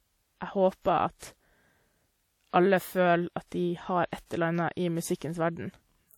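Across the whole speech clip there is plainly audible coding damage, likely from WMA compression. A transform codec like this encodes the sound in long blocks. Its quantisation noise smears over tens of milliseconds around each sound. The result is a ringing, washy quality, with a hiss that rises and falls with the signal. Nothing is present above 18.6 kHz. The level of damage fits a low bitrate of around 48 kbps.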